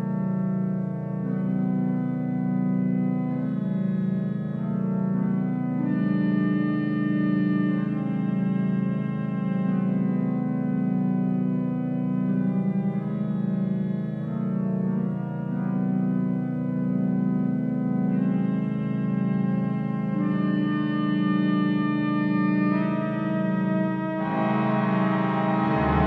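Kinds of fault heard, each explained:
No audible faults detected anywhere in the audio.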